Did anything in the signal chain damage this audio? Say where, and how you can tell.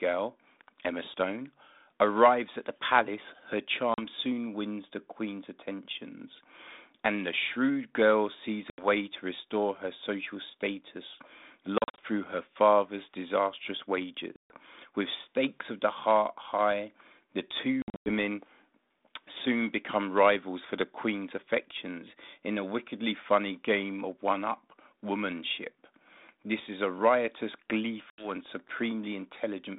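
Yes, the network stage. There's packet loss on an ADPCM call: hard-edged silent holes at 3.94 s (40 ms, between "at the palace her" and "soon wins the"), 8.7 s (80 ms), 11.78 to 12.01 s (140 ms in scattered bits), 14.36 s (140 ms), 17.82 to 18.13 s (200 ms in patches, the longest 100 ms, after "the heart high the") and 28.1 s (80 ms, after "is a riotous"). The gaps come in 20 ms steps, which fits 20 ms packets. The G.726 decoder's predictor and step size lose track of the sender across each gap, so the sound comes back slightly distorted before settling, all within the telephone-band 32 kbit/s line.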